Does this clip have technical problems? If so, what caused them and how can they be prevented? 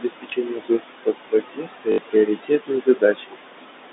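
Yes. Noise suppressor artifacts run through the whole clip. The suppressor pulls the room noise down by about 21 dB, frame by frame. So the background sinks in gaps and swells under the speech. Gentler suppression settings would prevent this.

Speech is also cut by the noise suppressor from 0.0 to 3.4 s. About two seconds in total are affected, with drops of up to about 22 dB. Quiet consonants and word endings were mistaken for noise and sound swallowed. Lowering suppression strength or adding speech protection would prevent it.

Packet loss with the last packet repeated occurs at 0.30–0.32 s and 1.92–1.98 s. The first gap lasts 20 ms, which fits one lost packet. The second lasts 60 ms, likely three lost packets. Each gap is filled by replaying the previous packet. The first gives a small blip and the second a brief robotic stutter. Better loss concealment or a more stable network would prevent it.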